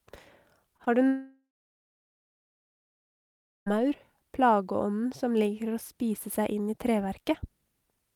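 At 0.77 to 0.81 s and again at 0.85 to 0.88 s there are two bursts of short concealed packet loss. About 20 ms of audio failed to arrive each time, and the receiver patched the gap by extending the preceding sound, leaving a quick smear or wobble. Because the audio carries straight on, these are distinct from a dropout.

From 1.08 s to 3.68 s comes a long network dropout, likely caused by a stall in delivery. The last sound is carried on briefly as a fading buzz or hiss, then roughly two seconds of silence follow. The speech resumes afterwards with about 2.6 s missing, rather than picking up where it stopped.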